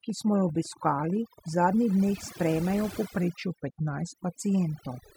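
Overdone noise removal runs throughout: the suppressor cuts bands near its noise estimate so hard that quiet speech goes too, leaving twinkling near-silence. A train of clicks runs from 0.10 to 1.49 s, about twenty similar pops at an uneven 15 per second, roughly as loud as the speech, likely interference or a faulty connection. A drift correction step spans 3.18 to 4.40 s, where playback slows 5.9% and pitch drops 106 cents, about a semitone, likely clock-matching software resizing its buffer.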